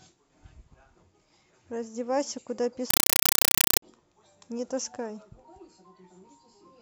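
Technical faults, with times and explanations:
2.90–3.82 s, compressed stream played as audio: an undecoded AC-3 bitstream reproduced as samples, heard as loud static chattering in 5.3 ms bursts 31 times a second.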